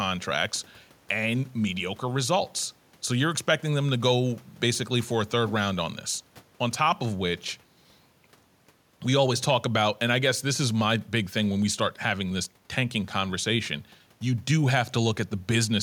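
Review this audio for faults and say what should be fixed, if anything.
Nothing stands out as needing a fix here, so this speech recording can be left as it is.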